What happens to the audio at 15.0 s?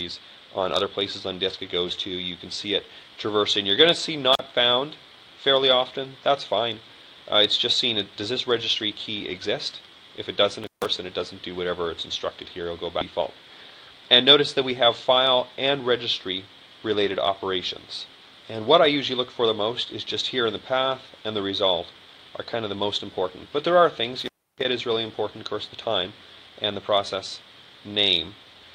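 A jitter buffer speed-up runs from 14.24 to 15.81 s: the receiver trims short pitch-period pieces, about 70 ms in total, so the sound plays roughly 4% faster at unchanged pitch.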